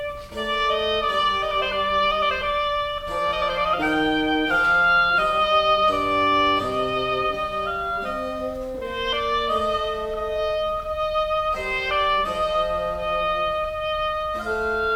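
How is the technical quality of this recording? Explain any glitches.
Nothing stood out on listening, and there were no glitches to explain in this recording.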